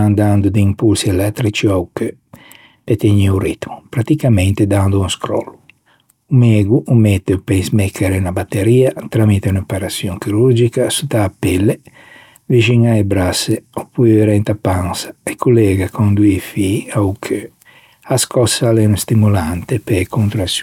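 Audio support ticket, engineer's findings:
Aliasing, whole clip. Sibilants on this speech sound gritty, a bit metallic, and the spectrum runs hard right up to 16 kHz. Points to a resample from 48 kHz down to 32 kHz with no proper anti-alias filter first. Anything above 16 kHz folds back as unrelated tones, sitting roughly 35 dB under the signal. Quiet, but you'll catch it on the esses. Check the resampler's filter stage.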